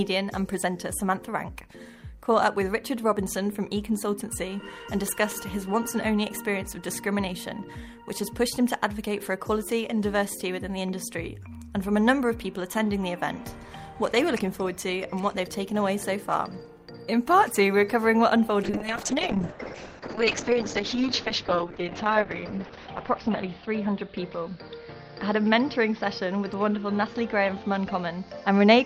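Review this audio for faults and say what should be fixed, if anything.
A call bitrate drop starts at 18.64 s and lasts to the end. The audio turns rough and muffled. Its bandwidth narrows from 20 kHz to 6 kHz, so the top end disappears. The coarseness points to the encoder falling from around 48 kbps to about 7 kbps after the bandwidth estimate collapsed. The worst stretch lasts 4.2 s. The bitrate never fully recovers before the clip ends. To prevent it, stabilise the network path and set a higher minimum encoder bitrate.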